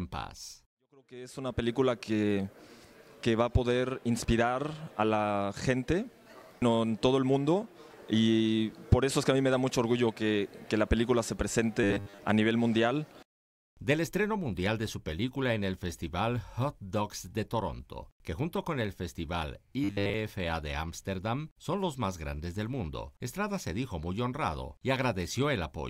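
New audio likely reached the playback software too seldom, so it filled the gaps by replaying a short buffer of roughly 10 ms, the length a fixed 100 Hz buzz points to, and skipped the real audio. The result is robotic sound from repeated short buffers at 11.84 to 12.19 s and again at 19.84 to 20.14 s: for most of each span the sound turns into a rigid, metallic 100 Hz drone that only loosely tracks what it replaced.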